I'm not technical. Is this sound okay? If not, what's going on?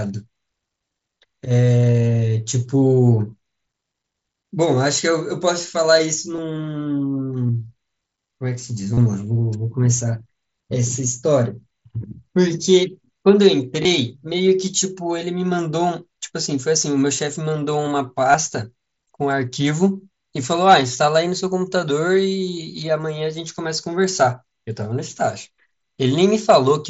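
No, not entirely. There's concealed Bluetooth headset packet loss: tiny dropouts between headset and phone at 6.36–6.38, 7.47–7.49, 8.94–8.98, 13.83–13.85 and 18.33 s, each patched by repeating the last bit of sound, giving brief buzzy blips, longest near 8.9 s.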